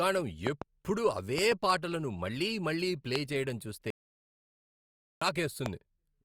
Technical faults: loud pop; audio dropout to silence

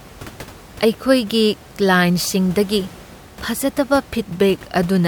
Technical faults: none

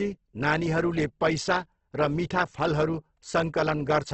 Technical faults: Opus compression

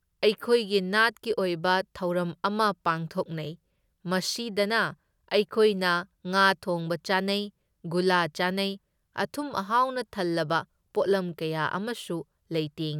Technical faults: none

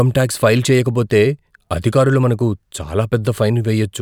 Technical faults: none

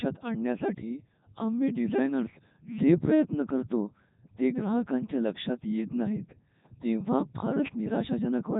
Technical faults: Codec 2 vocoder

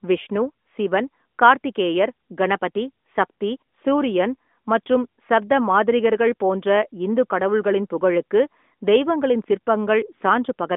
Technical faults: none

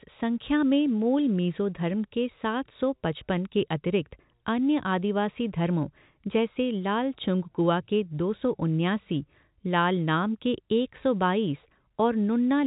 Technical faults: none

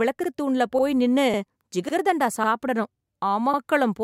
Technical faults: overlapping chunks

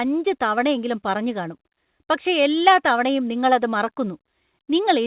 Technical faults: none

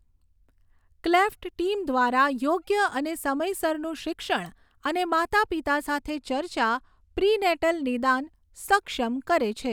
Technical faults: channel delay (comb filtering)

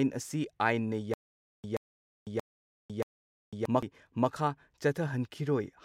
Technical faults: stutter with silent gaps; CD skip

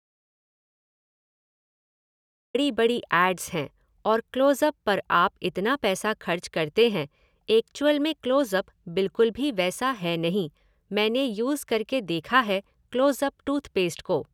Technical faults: audio dropout to silence

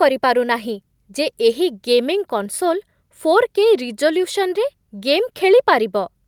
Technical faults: none

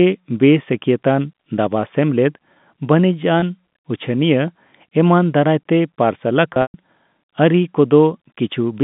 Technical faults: packet loss with pitch repetition

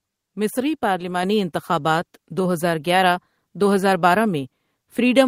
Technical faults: microphone volume stepped up

